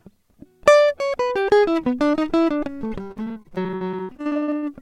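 From about 3.07 to 4.64 s the music breaks up with repeated packet loss, giving that robotic sound: 26 short dropouts, the longest about 59 ms, each papered over by stretching the last bit of audio, so roughly 42% of that stretch is patched.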